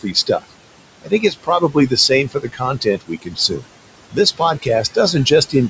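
Noise suppressor artifacts run through the whole clip. The suppressor judges which frequency bands hold steady noise and pulls them down frame by frame, here by about 21 dB. The room noise, about 14 dB below the speech, drops away in the pauses and rises again under the speech. The noise floor therefore pumps in step with the talking instead of staying level, and the sound is band-limited, with nothing above 8 kHz.

Speech cut by the noise suppressor occurs at 0.01–0.45 s, 1.02–1.92 s, 2.29–2.62 s, 2.81–3.65 s and 4.62–5.31 s. In these spans the suppressor mistook quieter parts of the speech for noise and turned them down with the background, by about 19 to 20 dB at the deepest and about 13 dB in the last span. Only pieces of each span are hit, from a brief moment to around half a second, so the parts that are hit sound swallowed or faint.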